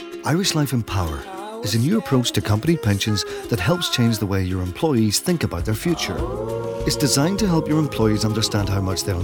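Nothing in the audio stood out as a technical problem on listening.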